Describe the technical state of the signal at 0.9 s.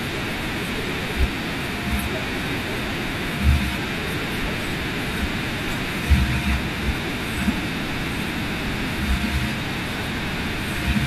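Frames out of order, from 0.84 to 0.93 s: two adjacent blocks of about 42.7 ms, each consistent with a two-frame run, play in swapped sequence. That short stretch of speech comes out as a garbled flutter, with no time lost.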